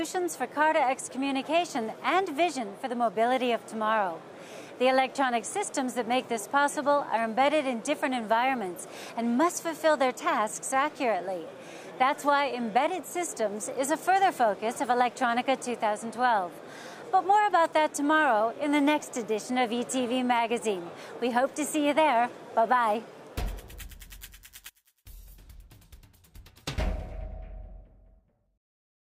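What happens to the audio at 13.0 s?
Nothing goes wrong at 13.0 s: the audio plays through that point intact, with no dropout, click, distortion or other fault.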